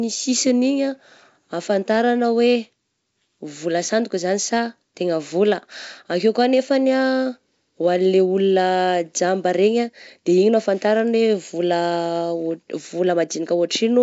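Speech carried over G.722 wideband telephone coding, with nothing technically wrong to report.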